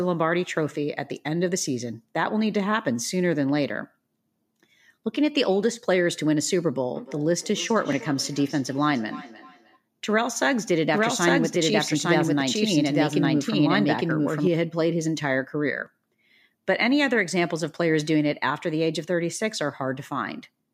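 From 6.95 to 9.81 s there is feedback echo between two devices. Speech returns at a steady interval of roughly 0.3 s, peaking about 18 dB below the speech. One device is replaying the other's audio. Its microphone recaptures it, and neither echo canceller removes it.

From 10.93 to 14.47 s the track is doubled. A full-band copy trails by about one second, at roughly the same level as the original. It has no decay or room colour, and it starts and stops abruptly. A slower second capture path or a misaligned edit is the likely cause.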